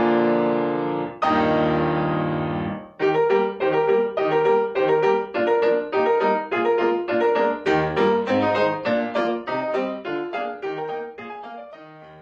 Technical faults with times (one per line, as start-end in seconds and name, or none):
8.21-12.22 adaptive stream at a lower bitrate